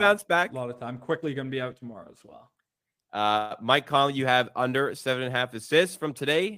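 Packets were likely held up and the jitter buffer ran dry at 3.37 s, causing a call audio freeze: about 130 ms of fading buzz, then speech resumes intact, later.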